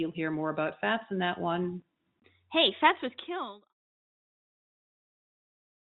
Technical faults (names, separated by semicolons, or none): none